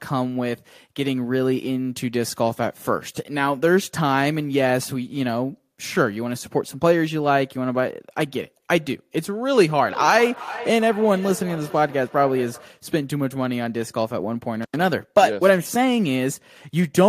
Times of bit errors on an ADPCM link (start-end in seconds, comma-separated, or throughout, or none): none